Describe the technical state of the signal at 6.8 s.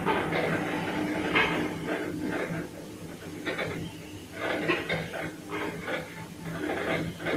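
At 6.8 s the audio is intact, with no dropout, distortion, glitch or other technical fault in the signal.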